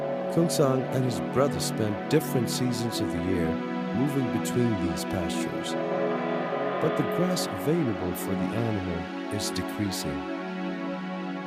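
No technical faults can be heard anywhere in this audio.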